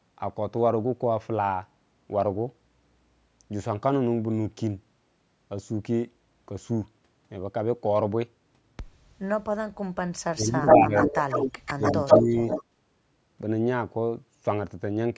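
From 10.32 to 11.15 s the speech sinks by as much as about 20 dB for roughly 0.7 s, in what is likely speech suppressed in double talk: the canceller, unable to tell the near talker from the far end's echo, turns everything down. On a waveform the envelope pinches in abruptly.

Overlapping this, from 10.68 to 12.22 s, a copy of the sound trails the original by 132 ms, and it is about as loud as the speech or slightly louder. This is likely an echo leak, with loudspeaker pickup getting past the canceller and being sent back. It sounds like a distinct, slightly delayed repeat of the voice. A spectrogram shows each syllable's pattern repeated a short distance to the right.

A second, shallower dip of about 10 dB, lasting roughly half a second, follows from 11.77 to 12.42 s. A brief, quieter echo scrap at the same 132 ms delay appears from 12.48 to 12.63 s. Throughout, nothing sits above 8 kHz, which is normal for this call path.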